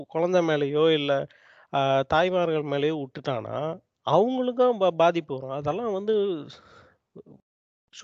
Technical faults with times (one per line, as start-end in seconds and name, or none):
none